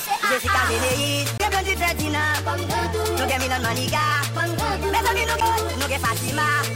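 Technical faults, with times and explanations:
1.38–1.40 s and 5.40 s, CD skip: at each point a knock or disc flaw throws the laser onto another turn of the spiral, so the player mutes very briefly, for roughly 20 ms and then roughly 10 ms, and resumes at a different place. That gives a small tick and a sudden jump in the sound. On a waveform, each appears as a short flat gap with mismatched levels on either side. On a spectrogram, it shows as a thin broadband vertical line where the patterns fail to join.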